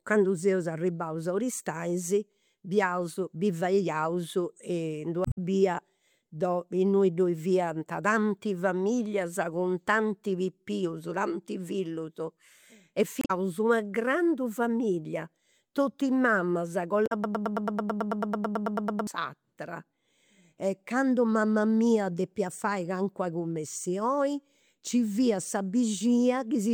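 Speech with damaged data in a compressed stream at 5.22–5.38 s, 13.19–13.31 s (just before "una grandu familia totus") and 17.03–17.12 s. Each is a brief glitch where the decoder misreads corrupted frames and resyncs at the next header; the first adds about 24 ms. On a spectrogram these show as brief broadband smears with hard vertical edges. A broken-record loop follows from 17.24 to 19.07 s: a 0.11 s fragment repeats 17 times, likely because the stream stalled and resent its last buffer. The waveform shows an identical, evenly spaced pattern, and the audio for that span is lost.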